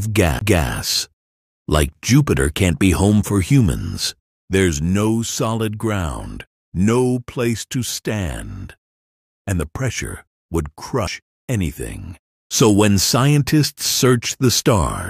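CD skips occur at 0.39 to 0.41 s and again at 11.07 s. Each time a knock or a flaw has made the laser jump to another turn of the disc's spiral, so the player drops out briefly and resumes from a different point. The first skip mutes for around 20 ms, the second for only a couple of milliseconds. Both are heard as a small tick followed by an abrupt discontinuity where the sound jumps.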